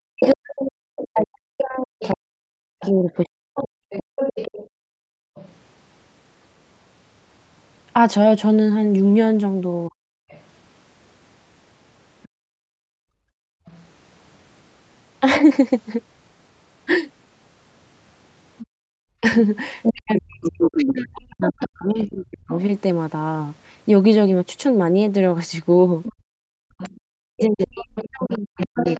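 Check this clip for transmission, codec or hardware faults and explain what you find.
The faults come from echo cancellation during two-way talk, in three kinds, heard against a band-limited call signal that stops at 8 kHz.

Speech suppressed in double talk occurs from 0.04 to 3.92 s, 9.88 to 10.22 s, 19.21 to 22.51 s, and from 27.16 s to the end. The talker's speech dips by up to about 40 dB or breaks apart. Likely cause: the canceller confused near speech with echo and suppressed both.

The other side's voice leaking through is heard from 0.22 to 5.51 s, 10.29 to 13.85 s, 18.58 to 22.62 s, and 26.04 s to the end. It sits about 10, 30, 5 and 15 dB below the talker. Likely, residual loudspeaker echo escaped cancellation.

Background gated by the echo canceller hits at 4.67 to 5.35 s, 12.28 to 13.66 s, 18.66 to 18.93 s, and 26.13 to 26.78 s. The room sound drops by about 36 to 38 dB, then returns. 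The canceller clamped the microphone while the loudspeaker played.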